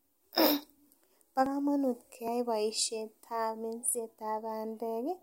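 Dropped buffers (overrun) at 1.46, 2.28 and 3.95 s: at each point the speech jumps forward with no gap, losing around 20 ms. This is likely the software failing to collect samples before the hardware overwrote them, splicing the two sides together.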